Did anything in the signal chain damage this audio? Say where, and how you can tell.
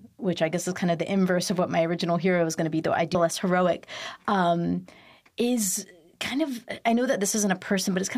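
Yes. At 3.14 s the speech jumps forward abruptly with a small blip, leaving a gap in the continuity. This is likely a stream segment skipped at the network or playback stage: one segment failed to load and the player resumed with the next.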